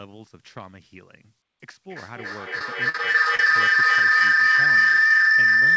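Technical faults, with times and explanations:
1.88 s to the end: feedback howl. A tone around 2 kHz builds and pulses roughly every 300 ms, peaking about 22 dB above the speech. Two devices share a room, so the loop gains level each trip until it rings at its favoured frequency.
2.59 to 3.47 s: repeated packet loss (robotic sound). Seven gaps totalling 140 ms, the longest 46 ms, are each patched by extending the previous sound. That leaves about 16 percent of this stretch synthetic, giving a choppy texture.
4.19 to 4.21 s: short concealed packet loss. About 10 ms of audio is missing. The receiver extends the preceding sound across the hole and blends it back into real audio, producing a brief smear or wobble.
4.56 to 5.31 s: scattered short gaps. Around four isolated losses, each up to about 20 ms, total 50 ms. Each is filled by continuing the last sound. Within the call's wideband path, which carries nothing above 8 kHz, they register as small hiccups.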